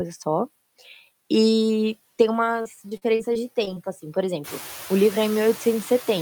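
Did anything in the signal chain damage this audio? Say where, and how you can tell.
Yes. Noise suppressor artifacts run through the whole clip, from the call-processing stage. The background sinks by about 12 dB in the pauses and swells back under the speech. The suppressor estimates steady noise in each frequency band, frame by frame, and pulls those bands down. It is still acting once the room noise rises by about 15 dB around four and a half seconds.

Repeated packet loss, heard as robotic sound, affects 2.61 to 3.78 s and comes from the network stage. Over that 1.2-second span the speech turns choppy, with brief holes that follow one another closely. The longest lasts 42 ms, and about 200 ms of audio is missing in total. The receiver patched roughly 186 ms of it by stretching the last decoded sound forward. About 16% of the stretch is synthetic fill, which produces the buzzy, mechanical texture.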